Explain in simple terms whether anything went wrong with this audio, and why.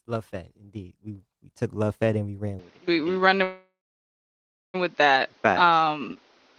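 Two problems can be heard, both in the later part of the speech.

From 2.59 s to the end, the sound becomes duller and boxier, with nothing above 6.6 kHz, a new background noise and a small shift in loudness. This is an input switched to a poorer device, likely a change to another microphone or a headset's call mode. There is no gap at the switch, and the change stays put rather than coming and going, which sets it apart from a momentary dropout.

From 3.43 s to 4.76 s there is a call audio freeze. For about 1.3 s the sound stalls, with the last sound briefly smeared out and then roughly a second of silence, and afterwards the speech resumes exactly where it stopped. Nothing is skipped, so the speech is delayed rather than cut, unlike packet loss, where a piece goes missing. The likely cause is late-arriving data on the call.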